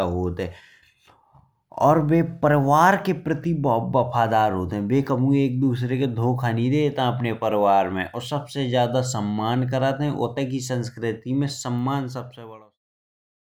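No technical faults are present.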